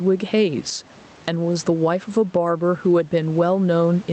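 Throughout the speech, the input gain was likely set far too high for the microphone, so a fast limiter or compressor keeps clamping down on every loud syllable and releasing in the pauses. The result is gain pumping, with the level swinging by around 10 dB; the room noise sits normally about 33 dB below the speech. Loud and quiet passages are pressed close together, giving the speech a squashed quality. The call path's coding, whose top end stops near 8 kHz as an Opus stream at a modest bitrate would, sits beneath this.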